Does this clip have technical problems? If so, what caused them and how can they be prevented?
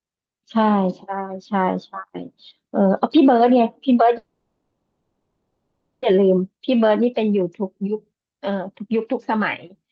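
Yes. From 4.17 to 6.04 s there is a call audio freeze, likely caused by delayed packets draining the jitter buffer: a fading buzz, then about 1.2 s of flat waveform. Prevention: give the network path steadier delivery and a deeper jitter buffer.

From 6.58 to 6.89 s a jitter buffer slow-down repeats pitch periods, adding 43 ms at 88% speed, with stretched harmonics on the spectrogram. Prevention: keep buffer targets stable so the buffer rarely needs to refill.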